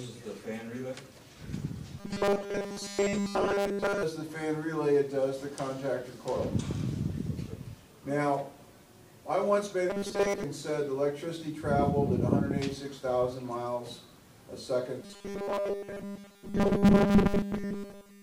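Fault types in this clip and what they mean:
Robotic sound from repeated short buffers: A rigid, metallic buzz pitched at 200 Hz replaces the natural sound from 2.0 to 4.03 s, 9.90 to 10.44 s and 15.02 to 18.23 s. The original sound still shows through loosely underneath. The likely cause is audio arriving too seldom, so playback keeps looping one very short slice, which fits a 5 ms buffer, instead of moving on. Most of the real audio in those stretches is skipped.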